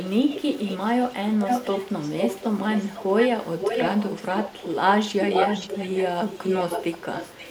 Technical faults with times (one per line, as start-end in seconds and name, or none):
0.00-4.74 echo leak
5.07-7.50 echo leak